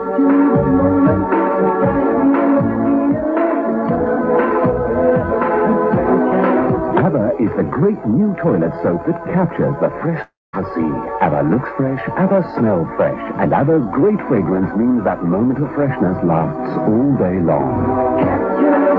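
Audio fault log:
10.22–10.55 s, long network dropout (the likely cause): the last sound is drawn out as a fading buzz for 310 ms, then falls to 210 ms of silence. The audio resumes with 320 ms missing. Unlike a brief packet-loss glitch, concealment gives up entirely and the lost section is skipped rather than delayed.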